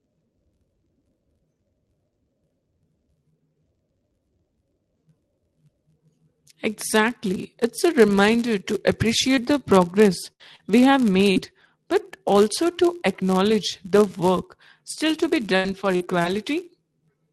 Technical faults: block size mismatch (padded); repeated packet loss (robotic sound)

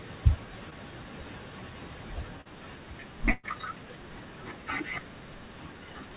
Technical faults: short concealed packet loss; burst of packet loss

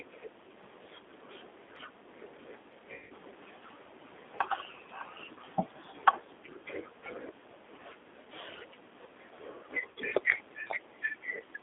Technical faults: G.729 codec; VoIP packet loss concealed by the speech codec

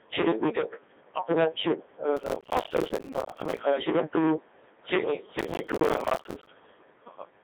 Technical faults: hard clipping; Codec 2 vocoder; processor overload crackle

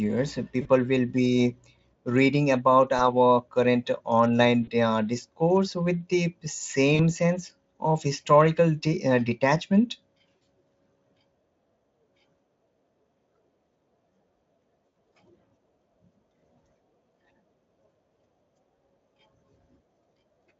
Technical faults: VoIP packet loss concealed by the speech codec

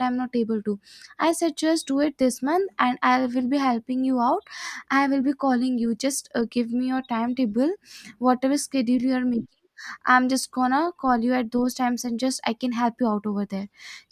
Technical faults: none

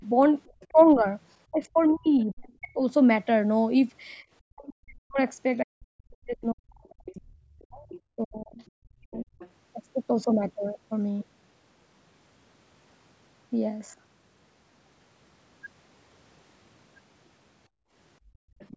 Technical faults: speech suppressed in double talk; other side's voice leaking through; background gated by the echo canceller

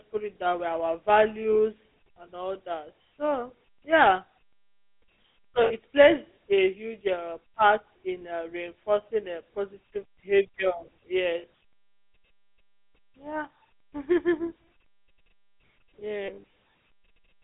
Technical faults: GSM full-rate codec; lost GSM frames

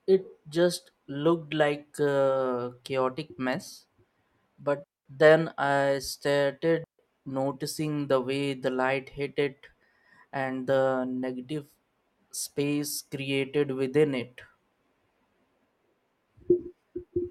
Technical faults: digital wireless dropout

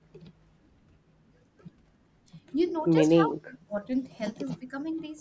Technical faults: echo leak; speech suppressed in double talk

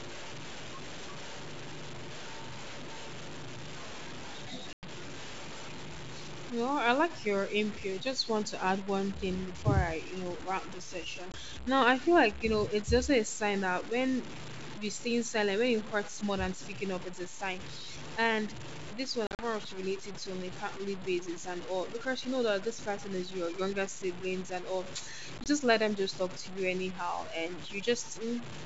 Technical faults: low bit depth without dither; packet loss on an ADPCM call

